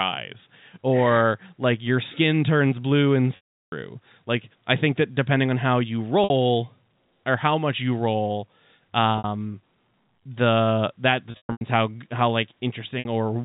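Packet loss with pitch repetition hits five times. The receiver repeats the last pitch period to fill each gap. At 3.36 s, after "skin turns blue and", 360 ms fades into silence. Short 60 ms buzzy holds follow at 6.24, 9.18 and 12.99 s. At 11.31 s, after "the that", gaps scatter over 300 ms.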